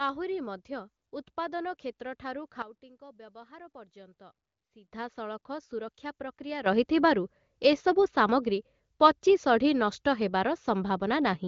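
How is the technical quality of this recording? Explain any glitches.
The level of the speech jumps abruptly twice, and the sound stops at about 7.4 kHz, as expected from wideband HD Voice phone coding.

Sudden gain jumps: At 2.62 s the speech and its background noise drop together by about 13 dB in a single step, then return at 4.88 s. At 6.66 s they leap up by about 12 dB and stay there to the end. The cause is likely a digital gain setting applied instantly rather than faded in, so the level changes from one sample to the next.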